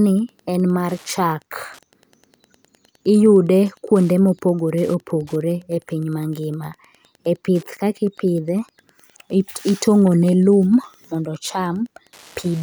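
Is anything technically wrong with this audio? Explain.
Yes. Wi-Fi interference runs through the whole speech recording as a steady, faint ticking roughly ten times a second, sitting well below the speech. A nearby Wi-Fi radio's beacon, repeating every 102.4 ms, is picked up and rectified by the audio circuitry, so each transmission becomes a small click. It differs from mains hum, which is a continuous low tone, and from GSM phone buzz, whose bursts repeat far faster and merge into a rasp.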